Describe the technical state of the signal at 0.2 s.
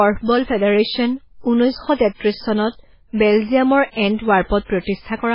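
At 0.2 s the speech carries heavy MP3 compression damage, present throughout: nothing above 5.3 kHz, with watery, swirling artefacts, likely from encoding around 16 kbps.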